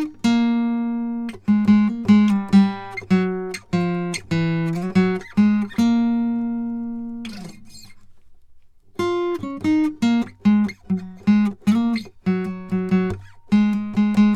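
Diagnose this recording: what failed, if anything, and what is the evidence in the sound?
Nothing in the signal chain has failed: the music arrives intact at every stage, with continuous audio and no audible disturbance to point to.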